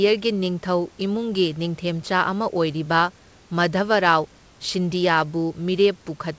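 No technical faults can be heard in this speech recording. The call path leaves nothing above 8 kHz, which fits a wideband codec such as G.722, and the room noise sits about 35 dB below the speech.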